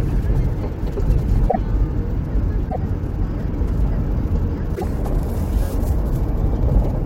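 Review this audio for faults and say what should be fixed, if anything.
A likely broken MP3 bit reservoir, where frames after a cut borrowed data that was no longer there, produces brief chirps or holes of about three 26.1 ms frames at 1.48–1.56 s, 2.68–2.76 s and 4.74–4.84 s. To prevent it, cut or splice MP3 streams only on frame boundaries with reservoir-aware tools, or decode to PCM before editing.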